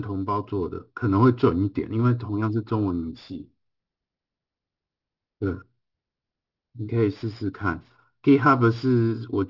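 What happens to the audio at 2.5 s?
Aliasing is present at 2.5 s, as it is throughout the clip. The speech was downsampled without a proper low-pass filter, which fits a drop to 12 kHz, so content above 6 kHz folds back below it, roughly 30 dB down, making sibilants gritty and metallic.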